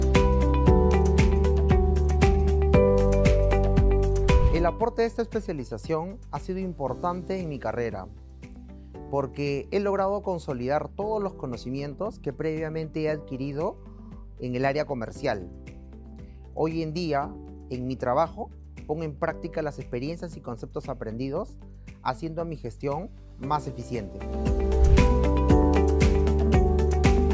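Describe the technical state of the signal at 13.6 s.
At 13.6 s the signal is intact, with nothing at that moment to mark as a fault.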